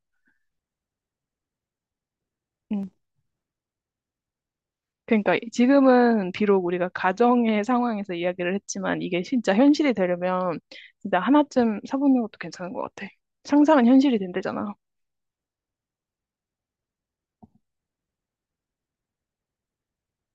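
From 2.83 to 3.50 s the speech breaks into processor overload crackle. The processor misses around twenty deadlines for very short buffers, about 1.5 ms each, and skips them. Unlike a single dropout, it is a dense gritty tearing that stops once the load passes.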